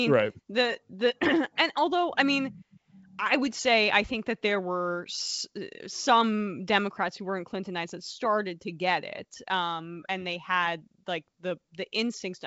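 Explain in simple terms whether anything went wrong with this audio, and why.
Nothing went wrong with this recording.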